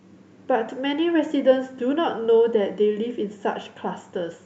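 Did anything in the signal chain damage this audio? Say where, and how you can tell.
No, nothing in this speech stood out on listening as damage from any stage of the chain, including the call path it travelled through.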